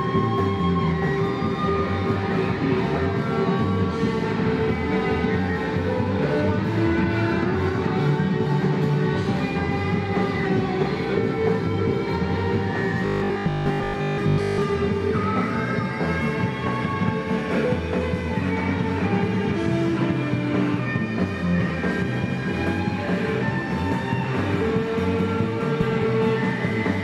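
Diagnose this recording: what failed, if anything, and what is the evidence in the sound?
Robotic sound from repeated short buffers, 13.06 to 14.62 s: the sound collapses into a rigid, metallic buzz locked at 50 Hz. The likely cause is a starved driver or buffer stage replaying the last 20 ms block while most of the real audio is skipped.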